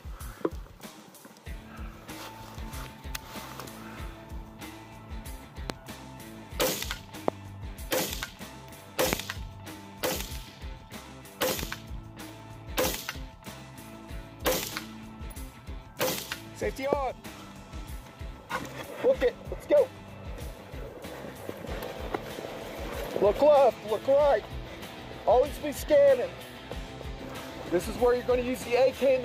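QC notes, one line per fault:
5.70–5.72 s, 7.28–7.30 s, 9.13–9.15 s, 11.51–11.65 s and 16.93–16.95 s: loud pop. Sharp, brief thumps stand roughly 15 to 25 dB above the sound, which carries on beneath them. At 11.51 s there is a quick double pop. The likely cause is a sudden voltage pulse, from static, a switch or a driver glitch, added to the signal and shaped by the downstream circuits.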